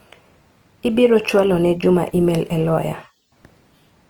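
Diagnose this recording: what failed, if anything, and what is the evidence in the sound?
The codec stage is where this one went wrong: the speech sounds grainy and rough for the whole clip, with a noisy haze in place of clean detail, yet the top end stays open. That's likely Opus compression in its CELT mode, filling starved bands with noise, which fits a rate around 24 kbps.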